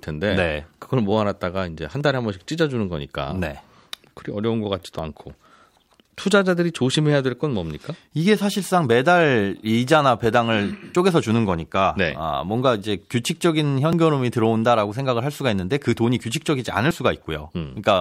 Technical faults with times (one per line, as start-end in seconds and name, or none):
2.01 audio missing between chunks
4.99 audio missing between chunks
10.95 audio missing between chunks
13.93 audio missing between chunks
16.91 audio missing between chunks